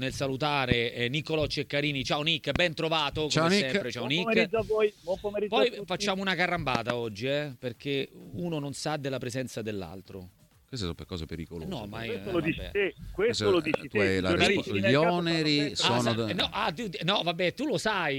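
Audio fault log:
0.72–0.74 s, 2.56–2.58 s, 13.74–13.76 s and 16.40–16.42 s, loud pop: a sudden voltage step, likely from a plug, switch, static discharge or driver glitch, enters the signal path and is shaped by the circuits after it. Each is a single sharp pop, about 15 to 20 dB above the sound, which carries on beneath it.
6.75–6.92 s, loud pop: two voltage pulses, likely from the same kind of electrical disturbance, arrive in quick succession within this span and pass through the following stages. The result is a double pop about 20 dB above the sound, which continues underneath.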